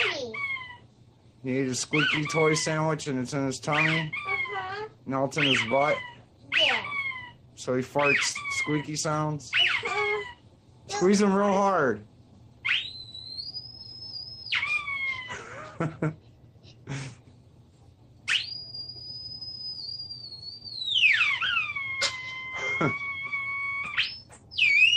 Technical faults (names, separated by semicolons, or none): clock drift between sender and receiver; repeated timing corrections; scattered short gaps